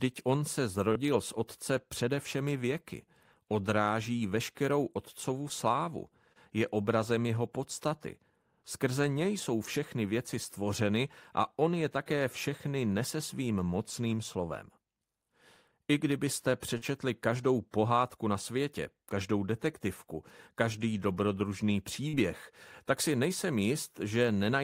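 Brief smears interrupt the speech at 0.92–0.96 s, 5.49 s, 6.33–6.36 s, 16.77–16.82 s and 22.08–22.14 s, each a momentary wobble where the sound blurs rather than drops out. This is short concealed packet loss: chunks of about 30, 10, 30, 40 and 40 ms arrived too late for the decoder, so the receiver extended the preceding sound to cover each gap before blending back into the real signal.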